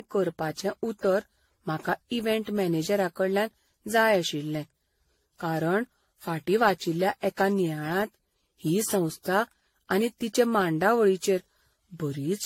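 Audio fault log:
throughout, generation loss: the speech sounds swirly, smeared and hollow, with blurred attacks and nothing above 16.5 kHz, likely from repeated AAC-LC coding at about 64 kbit/s, around seven passes, each requantising on a shifted frame grid so noise and spectral holes accumulate.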